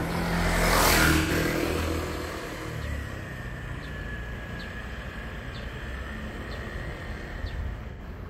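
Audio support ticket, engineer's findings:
AAC frame loss with concealment at 1.20–1.31 s, 5.60–5.64 s and 7.90–8.01 s: brief smeared, phasey patches of roughly 43–85 ms in the AAC decoder, which fits one or two lost frames. Unlike a hard dropout, there is no silent gap.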